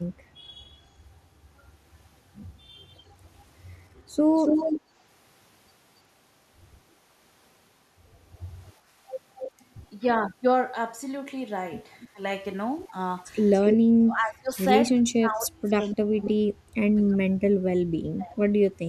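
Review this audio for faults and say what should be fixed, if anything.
Delayed copies of the speech return about 283 ms after the original at 2.88–2.98 s, 4.36–4.81 s, 9.36–9.51 s, 12.0–12.08 s, 13.54–13.77 s and 15.91–16.3 s. They range from barely audible at 2.88 s to roughly as loud as the speech itself at 4.36 s. This is echo leak, likely from a far end on loudspeaker whose echo canceller let its microphone pickup through and sent it back. Prevention: the far end should use a headset or retune its echo canceller for this delay.

The speech also dips by about 15 dB for a moment at 12.13–12.19 s. From 13.97 to 18.39 s it fades and breaks up repeatedly, about 3 s in total, sinking by as much as about 35 dB. This is speech suppressed in double talk. While both sides were talking, the echo canceller likely mistook this talker for loudspeaker echo and turned everything down. Prevention: the canceller's double-talk detection needs improving so that it keeps near-end speech open.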